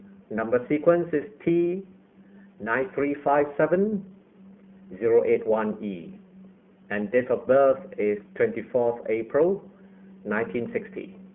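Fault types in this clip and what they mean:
iLBC codec: The speech sounds thin and boxed-in, with nothing below 200 Hz or above 3.4 kHz, and has a plainly audible rough, synthetic edge. This comes from iLBC narrowband coding, which rebuilds each 20 ms frame on its own, and fits its 15.2 kbps mode.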